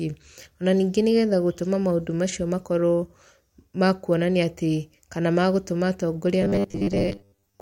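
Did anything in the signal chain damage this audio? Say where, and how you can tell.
Yes. From 6.42 s to 7.61 s the speech turns into a rigid metallic buzz at 100 Hz. This is robotic sound from repeated short buffers, likely a starved driver buffer replaying 10 ms chunks for most of that span. Unlike mains hum, it still follows the syllables.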